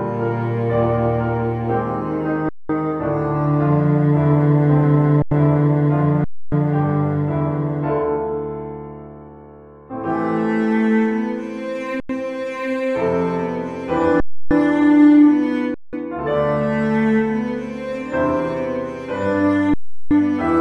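The audio keeps freezing into underruns with a held sample at 2.49, 5.22, 6.24, 12.0, 14.2, 15.74 and 19.74 s. Each time it goes flat for about 90 to 370 ms, then picks up where it left off with only a soft restart. The 4096-sample gaps fit a 44.1 kHz stream.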